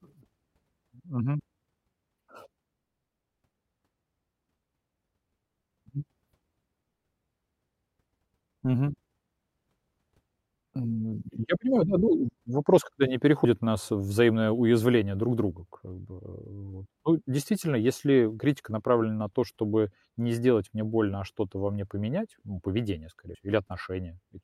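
At 13.45, 18.40 and 23.35 s the speech skips about 50 ms. This is audio missing between chunks, likely dropped at 5-second chunk boundaries.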